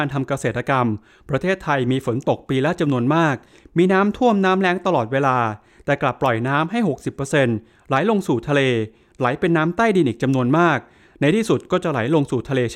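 No technical fault can be heard anywhere in this speech recording. There is nothing to flag at any point in the audio.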